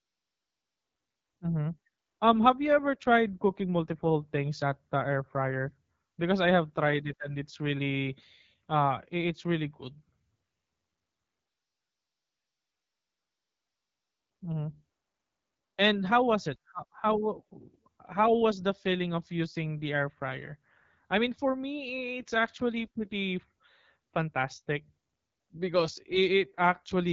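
From start to finish the speech carries the sound of the AMR wideband (HD Voice) codec, with plainly audible damage: a rough, raspy texture that points to one of its lowest modes, consistent with about 8.85 kbit/s. The codec models the vocal tract and drives it with sparse pulses, and at this rate the pulse excitation is too coarse. On a spectrogram, harmonics below 6.4 kHz look smeared, the band above holds only unstructured noise, and nothing appears beyond 7.5 kHz.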